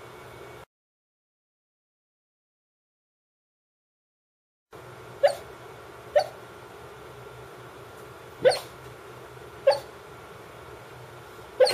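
No technical faults can be heard anywhere in this clip.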